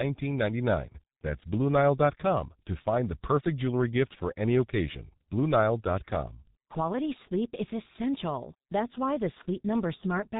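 Throughout, the speech carries heavy G.723.1 codec damage. Nothing passes above 3.8 kHz, so it sounds muffled and hoarse, with smeared consonants, which fits a rate near 6 kbit/s.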